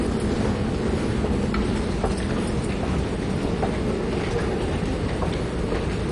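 Throughout the recording, the sound is dull and carries a gurgling, granular distortion that is plainly audible. Nothing is present above about 11.3 kHz. The likely cause is MP2 compression at a low bitrate, with the damage pointing to something near 48 kbps. MPEG Layer II divides the spectrum into 32 sub-bands and shares a small bit budget among them. Here the upper bands are dropped entirely, and the remaining ones are quantised so coarsely that the texture turns grainy and unsettled.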